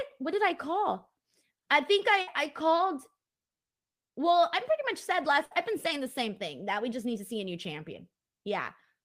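A burst of packet loss hits the speech twice, at 2.21 to 2.29 s and again at 5.45 to 5.53 s. Each time a short run of packets never arrived in time, and the receiver covered the hole by stretching the last sound it had for just under 60 ms, letting it fade. That concealment is heard as a brief held buzz or dying hiss, after which the speech jumps ahead, with about 60 ms of it simply gone.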